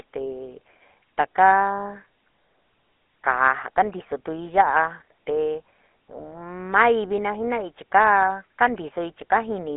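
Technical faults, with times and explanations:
Throughout, GSM full-rate codec: the whole clip has that unmistakable old mobile-phone sound. The speech is squeezed into a narrow line band of roughly 200 Hz to 3.4 kHz, with nothing at all above 3.8 kHz, so it's thin and dull. On top of that there's a plainly audible buzzy, gravelly roughness. That comes from the codec rebuilding the voice from a vocal-tract model driven by a sparse pulse train, which fits 13 kbps full-rate GSM.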